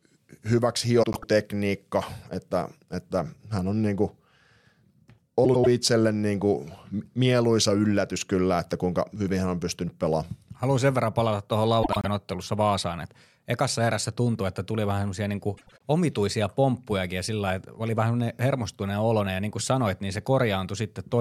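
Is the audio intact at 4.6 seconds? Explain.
Yes, at 4.6 seconds the speech plays through cleanly, with no audible dropout, distortion or other fault at that moment.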